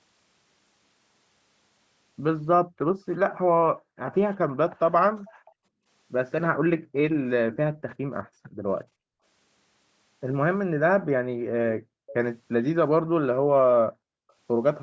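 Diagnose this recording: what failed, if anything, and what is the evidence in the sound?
Background gated by the echo canceller, in the call processing stage, at 2.69–4.07, 5.25–9.21, 10.67–12.07 and 13.0–14.3 s. The room sound drops by about 40 dB for brief stretches, under a second or two each time, as the canceller clamps the microphone while the far end plays.

Echo leak at 4.11–4.18, 5.26–5.52 and 11.82–12.14 s: a faint copy of the speech arrives 384 ms late, quiet in the first two and louder at 11.82 s. Its likely cause is residual loudspeaker pickup that the echo canceller failed to remove and returned down the line.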